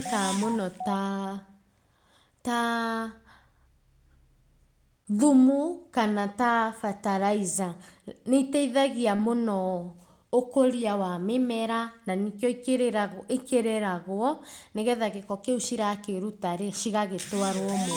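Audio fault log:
9.15–9.21 s, short concealed packet loss: about 40 ms of audio never arrived in time, and the receiver bridged roughly 35 ms by extending the preceding sound before blending back into real audio. The patched stretch comes across as a brief smear.
9.19–9.25 s, lost packet rebuilt from error correction: about 40 ms was replaced by low-bitrate redundant copies carried in following packets, which suggests two lost packets. There is no gap, but those frames sound rougher and noisier.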